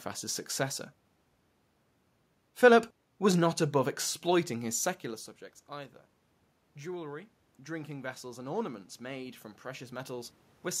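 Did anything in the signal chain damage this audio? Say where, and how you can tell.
Yes. Automatic gain rising, from 6.82 s to 10.76 s, in the call-processing stage. After the talker moves back from the microphone at around five seconds, the input level falls by about 16 dB. Over the next four seconds the automatic gain control slowly adds about 7 dB to compensate. You can tell it is the gain stage and not the talker because the voice and the room noise swell together.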